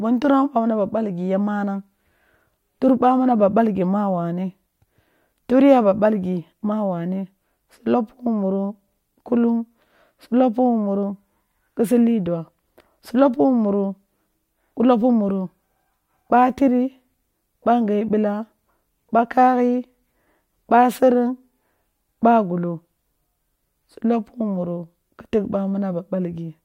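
No technical faults can be heard anywhere in the recorded speech, so there are no events to place in time.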